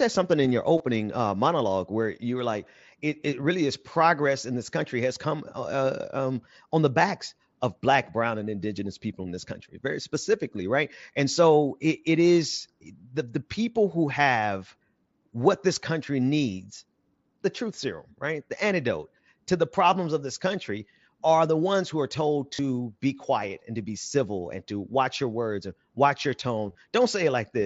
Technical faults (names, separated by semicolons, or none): concealed Bluetooth headset packet loss